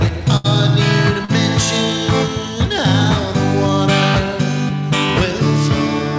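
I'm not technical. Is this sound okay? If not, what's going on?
No. There is a burst of packet loss from 0.37 to 0.47 s. A run of audio packets never arrived in time, so the receiver stretched the last sound for about 73 ms, letting it fade into a hum or hiss. About 80 ms of the real sound is gone, and playback then jumps ahead.

There is also a short concealed packet loss from 1.25 to 1.31 s. About 40 ms went missing. The receiver patched the hole with roughly 34 ms of guessed sound built from what came just before, which you hear as a quick smear or wobble.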